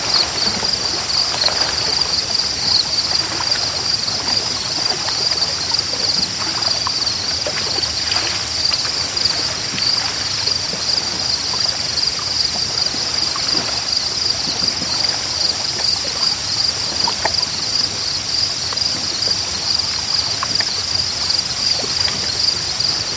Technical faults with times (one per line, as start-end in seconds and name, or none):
none